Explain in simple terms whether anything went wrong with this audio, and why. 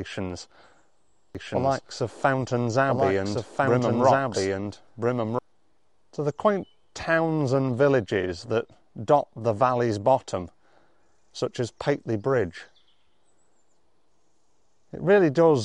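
A second, slower path likely captured the sound again, creating a doubled audio track from 1.35 to 5.39 s: an equally loud copy trails about 1.5 s behind.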